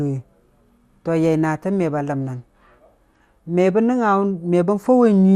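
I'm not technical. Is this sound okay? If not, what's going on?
No, the speech sounds dull and muffled throughout, with a gurgling, grainy edge. The likely cause is MP2 compression squeezed too hard, cutting away the treble and roughening what's left.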